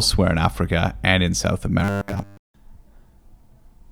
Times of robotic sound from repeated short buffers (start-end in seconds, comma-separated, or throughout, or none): 1.80-2.37